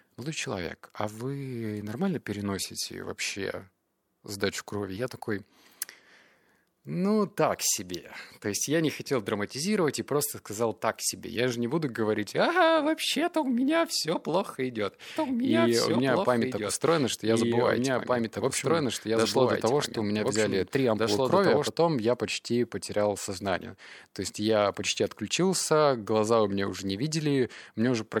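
A second capture path running late, or an edit holding two copies out of step, likely mixes the speech in twice from 15.16 to 21.7 s: a doubled audio track trailing about two seconds behind at roughly equal level, dry, starting and stopping abruptly.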